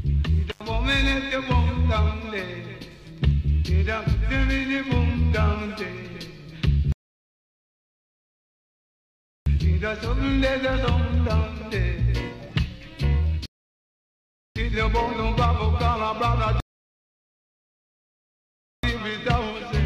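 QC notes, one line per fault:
0.52 to 0.62 s, intermittent contact: a loose plug or cable briefly lost connection, opening the line for about 89 ms. The sound drops out with crackle at both edges and faint hiss in the gap. Unlike a buffering pause, the gap is noisy and the sound that would have played there is lost.
6.92 to 9.46 s, 13.46 to 14.56 s and 16.60 to 18.83 s, rebuffering stall: the player ran out of downloaded audio and waited for more, adding 2.54 s, 1.10 s and 2.23 s. Each gap is clean silence, and playback resumes exactly where it stopped, so nothing is missing.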